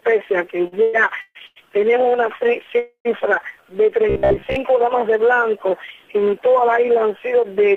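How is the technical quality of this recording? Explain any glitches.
The recording has three network-related glitches in its first 4.6 seconds, each a stall or repeat in the incoming audio stream.

Repeated stalls (stutter), 0.67 to 1.58 s: five times the jitter buffer ran dry, and the receiver stretched the last sound, filling 406 ms (longest 140 ms) with nothing missing, so the audio drags.

Call audio freeze, 2.79 to 3.07 s: delayed packets likely emptied the buffer. A 261 ms gap appears, about 100 ms of it silent, then the audio resumes intact.

Robotic sound from repeated short buffers, 4.10 to 4.56 s: most of this stretch is a looped 15 ms chunk, likely from starved buffering, giving a rigid metallic buzz at 66.7 Hz.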